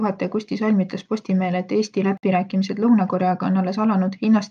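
A gap at a join of encoded pieces opens at 2.17 s and lasts to 2.23 s, a gap of about 57 ms. Separately encoded segments were joined untrimmed, leaving encoder delay and end padding in place, so the speech drops out and resumes where it left off.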